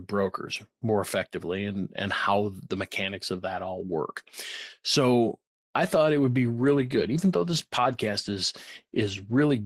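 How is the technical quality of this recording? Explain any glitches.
A call bitrate drop starts at 5.83 s and lasts to the end of the clip. The connection's bandwidth estimate fell, so the encoder had to spend far fewer bits on each stretch of speech, which fits a cut from about 32 kbps to roughly 17 kbps, held at the lowest rate for about 3.45 s. With coarser coding, the speech turns rough and watery, and the top end dulls toward a muffled sound because high frequencies are dropped.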